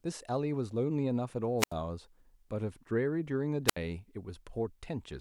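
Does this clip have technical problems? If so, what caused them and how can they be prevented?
Yes. Wireless microphone squelch dropouts occur at 1.58–1.73 s (about 79 ms muted) and 3.67–3.77 s (about 70 ms muted). In each, the fading radio signal causes a short rise of hiss before the receiver's squelch mutes it. On a spectrogram, this appears as a broadband smear followed by an empty vertical gap. On a waveform, it appears as a flatline. To prevent this, keep the transmitter within clear line of sight and range of the receiver, and use diversity reception.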